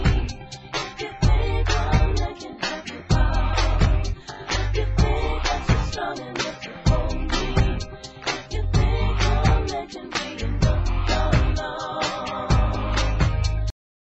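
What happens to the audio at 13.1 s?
Nothing goes wrong at 13.1 s; the audio runs on intact through that moment with no dropout, click or other fault.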